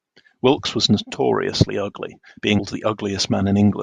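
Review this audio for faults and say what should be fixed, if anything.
At 2.58 s the speech is broken by a brief glitch lasting under 20 ms, the sign of damaged data in a compressed stream. A stretch of the encoded bytes at that point was lost or corrupted, so the decoder could not read the frame correctly, lost synchronisation, and produced a glitch while it searched for the next valid frame header. To prevent it, verify the file or stream with checksums and retransmit or re-encode any corrupted segment.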